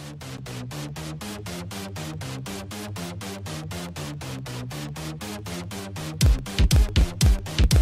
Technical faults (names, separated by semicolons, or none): periodic USB or driver dropouts